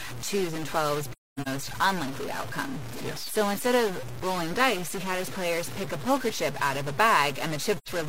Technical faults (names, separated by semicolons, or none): stuck bit; AAC frame loss with muting